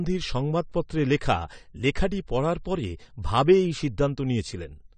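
From start to finish the speech has no content above 9 kHz and a plainly audible smeared, warbling texture, with sibilants turning fizzy and watery. The likely cause is AAC compression, with the sound pointing to AAC-LC at a low bitrate around 32 kbps, where the encoder lowers its cut-off and leaves gaps across the spectrum. A plain low-pass filter would dull the top end just as much, but it would not add this swirling, unstable grain.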